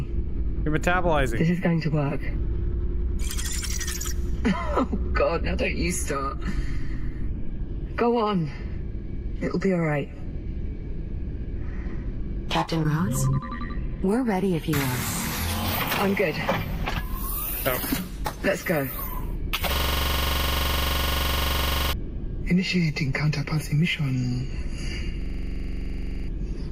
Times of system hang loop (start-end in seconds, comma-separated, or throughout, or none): 19.75-21.93, 25.22-26.28